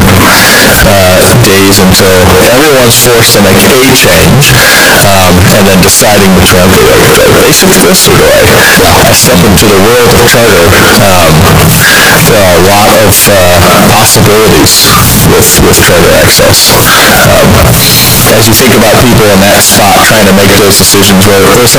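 From start to finish the speech is buried under very loud, harsh, buzzing distortion, and the quiet gaps between phrases are as loud as the speaking itself. This points to a signed and unsigned mix-up: the 16-bit samples were likely read with the wrong sign convention, which flips the top bit. Every small swing around zero then turns into a leap across the full range, so each zero crossing becomes a jump across the whole range.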